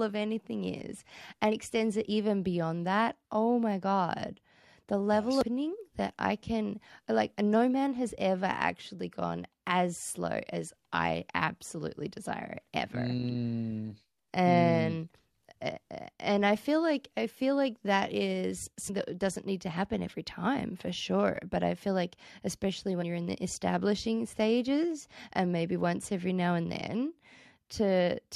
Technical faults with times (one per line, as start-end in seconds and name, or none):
1.51 damaged data in a compressed stream
5.41 damaged data in a compressed stream
11.64 damaged data in a compressed stream
18.88 damaged data in a compressed stream
23.01 damaged data in a compressed stream